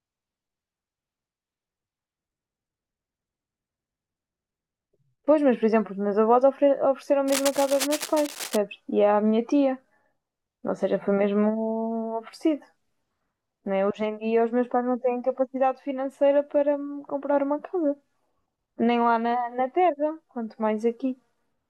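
A speech clip with a burst of scratching, rustling noise from 7.27 to 8.57 s, about 10 dB below the voice: cable scratch noise, likely from a worn cable or connector being moved.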